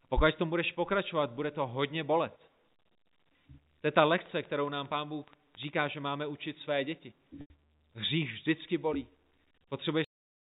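From 4.26 to 5.75 s a train of clicks runs over the speech: about twenty sharp, similar pulses at an average of 12.8 per second, spaced irregularly rather than on a steady beat. Their peaks come up to roughly the level of the speech itself, so they read as a distinct ticking layer on top of the signal and do not fade with it. A repeated pulse like this is likely interference from nearby equipment or a faulty connection or power supply.

At 7.41 s there is a packet loss with pitch repetition lasting 90 ms, ending at 7.50 s. The gap fits three lost 30 ms packets. The receiver filled it by looping the last pitch period it had and fading it down, so the voice briefly hangs on a buzzy, slightly frozen tone that fades into silence before the real signal resumes through a short cross-fade.

The clip then has a cut-off end at 10.04 s. The final stretch of buffers was never delivered, so the speech stops partway through a sound and drops straight to digital silence with no natural decay, which gives the ending an abrupt, clipped edge. 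The line uses G.711 A-law telephone coding at 64 kbps. Its 4 kHz bandwidth limit and faint level-following noise floor are present throughout, but they add little audible damage.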